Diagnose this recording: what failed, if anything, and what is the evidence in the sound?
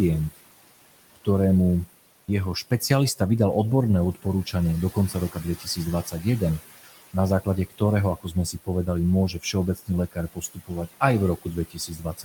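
The call-processing noise suppressor is pulling steady noise down by about 18 dB throughout, so the room noise sinks between phrases and swells beneath the speech.

The same call-processing stage mistakes speech for noise at 4.94–6.61, 7.13–7.81, 8.18–8.87, 9.33–11.01 and from 11.37 to the end, cutting syllables by up to about 18 dB so they sound swallowed.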